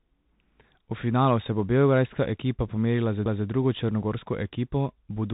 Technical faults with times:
0.00-5.33 Bluetooth CVSD headset codec

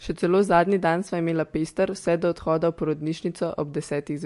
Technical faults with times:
0.00-4.25 MP3 compression

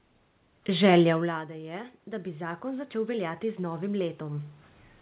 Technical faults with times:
1.06-4.56 automatic gain rising

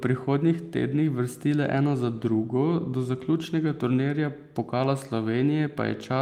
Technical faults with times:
none

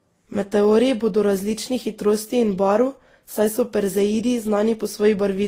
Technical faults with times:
0.00-5.48 transcoding between lossy codecs

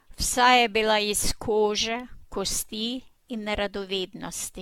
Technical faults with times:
0.00-4.61 generation loss

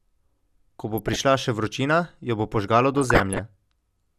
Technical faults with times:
0.92-1.19 DAB burbling
2.94-3.39 DAB burbling

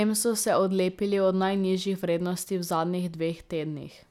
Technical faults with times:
none

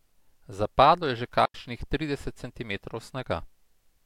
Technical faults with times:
1.45-1.54 digital wireless dropout

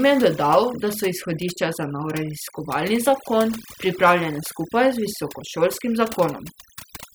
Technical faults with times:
0.00-7.14 overdone noise removal

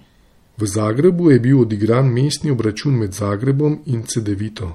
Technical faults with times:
0.00-4.74 MP3 compression

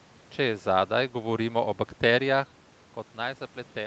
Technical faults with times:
0.39-2.54 automatic gain falling

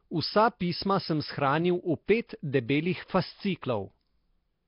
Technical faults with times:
0.00-4.68 Nellymoser compression

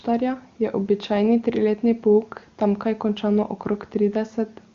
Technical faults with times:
none

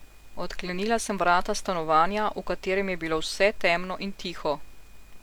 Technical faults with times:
none

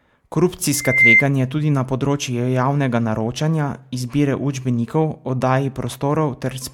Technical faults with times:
0.73-1.24 loudspeaker feedback squeal

